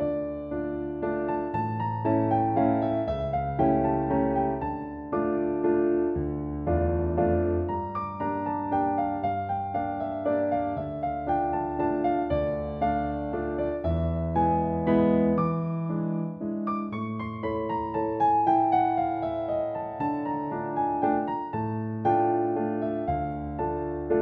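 Nothing stood out as a technical problem on listening.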